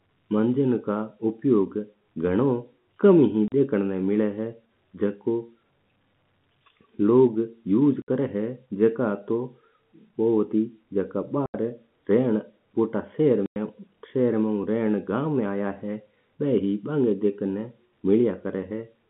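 Packets were dropped and the receiver played silence in their place, which is packet loss filled with silence. Holes open at 3.48, 8.02, 11.46 and 13.46 s, lasting 40, 60, 80 and 100 ms. These lengths fit 20 ms packets, and each gap has hard edges.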